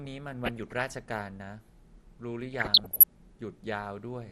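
MP2 compression runs through the whole speech clip: dull, gurgling, granular sound, likely from MPEG Layer II coding at a low rate, around 80 kbps, switching off upper sub-bands. DAB burbling strikes from 0.44 to 0.82 s and again from 2.53 to 3.04 s, when reception bit errors corrupt sub-band samples, producing short blips of noise in single sub-bands over the speech.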